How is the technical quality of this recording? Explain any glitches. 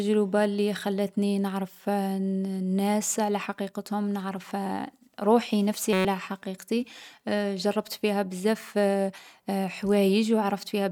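One glitch affects the speech: a system hang loop from 5.93 to 6.05 s, just after "روحي نفسي". The system stalled while the sound hardware kept replaying one 5.33 ms slice, which fits a 256-sample buffer, 22 times over. The result is a steady 188 Hz buzz that replaces roughly a tenth of a second of audio.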